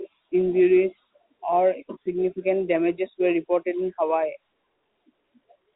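No faults are audible in this speech; it sits in a G.711 telephone band with nothing above about 3.8 kHz.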